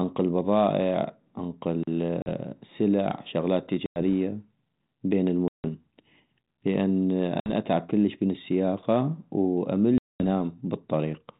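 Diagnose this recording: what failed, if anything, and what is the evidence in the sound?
Speech drops into abrupt, hard-edged silences at 2.22, 3.86, 5.48, 7.4 and 9.98 s, lasting about 40, 100, 160, 60 and 220 ms. Each time the sound resumes slightly distorted before settling. This is packet loss on an ADPCM call at the network stage, with a few packets to ten gone at a time. The gaps are filled with silence, so the decoder's adaptive predictor and step size lose step with the sender's and must re-converge. The band-limited telephone sound fits G.726 ADPCM at 32 kbit/s.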